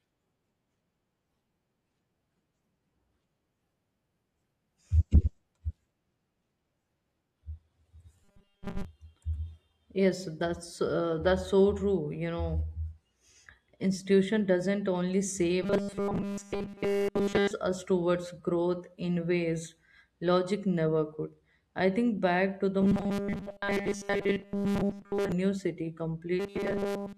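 Robotic sound from repeated short buffers appears at 8.24–8.85 s, 15.63–17.51 s, 22.82–25.32 s and 26.40–27.17 s. During each stretch the speech becomes a rigid, metallic buzz fixed at 200 Hz, which fits a 5 ms fragment being looped. The likely cause is audio arriving too seldom, so playback repeats the last scrap while real audio is skipped. The repetition covers most of the first and third stretches and nearly all of the second and fourth.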